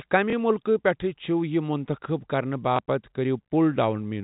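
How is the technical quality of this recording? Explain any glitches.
The recording has two glitches, both repeated buffers, heard over sound that is band-limited by G.711 telephone coding to nothing above about 3.8 kHz.

The repeated buffers occur at 0.30 to 0.33 s and 2.76 to 2.79 s. Fresh audio reached the playback device late each time, so it played its previous 23 ms block once more, which fits a 1024-sample buffer. Each event is heard as a brief stutter with a hard join, and about 20 ms of audio is lost.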